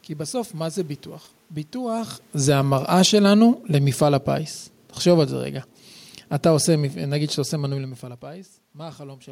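Speech, with automatic gain falling from 1.76 s to 5.41 s. The level control judged the input too loud or its background noise too strong, and pulled its gain down slowly. Over those few seconds the sound drops by about 6 dB. The room noise sinks with it, which separates this from the talker moving, heard around 2 s and again near 7.5 s. A gain change at the microphone shifts the voice and the background together.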